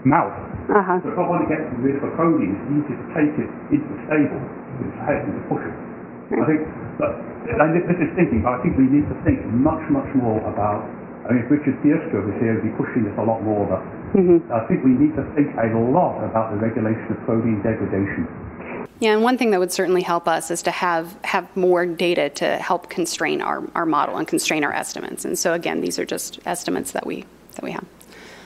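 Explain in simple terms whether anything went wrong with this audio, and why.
Something did go wrong. The sender's clock ran faster than the receiver's, by about 4 percent. This is clock drift between sender and receiver. Audio kept arriving a little too quickly, so the receiver's waiting buffer kept filling up instead of staying level.

To cope, the receiver made repeated timing corrections from 0.16 s to 28.36 s. It kept trimming out tiny bits of sound to keep pace with the 104 percent rate. The trims come at uneven gaps, so the sound has slight hiccups.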